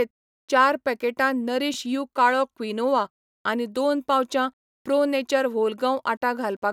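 At 1.74 to 1.76 s, overlapping chunks: a 3.0 s chunk began 20 ms before the previous one ended, so that stretch plays twice as a brief stutter.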